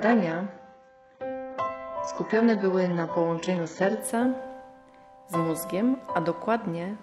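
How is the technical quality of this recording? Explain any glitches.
The recording has one fault, at the start. From 0.0 to 4.0 s it is an adaptive stream starting at a low bitrate: the player opened on a very thin encoding, consistent with something like 8 kbit/s HE-AAC, so nothing sounds above 7.9 kHz, the treble is missing and artefacts are stronger. At 4.0 s it switches without a gap to a much fuller version, plausibly around 96 kbit/s AAC-LC.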